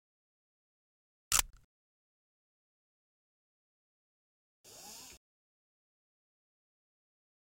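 At 1.50 s the output path dropped about 30 ms of samples and replaced them with zeros, a block of digital silence that points to a buffer not being filled in time. The sound stops dead until 1.53 s and resumes abruptly.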